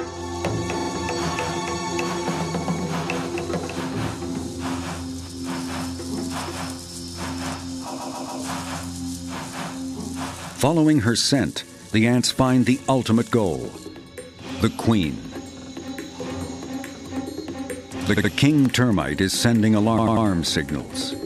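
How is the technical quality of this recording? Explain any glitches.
The recording has a recurring stutter. Repeated frames occur at 0.79, 7.97, 15.58, 18.16 and 19.97 s. A short run of compressed frames is decoded again, so a 46 to 139 ms block replays two or three extra times. The audio runs about 1.02 s longer in total.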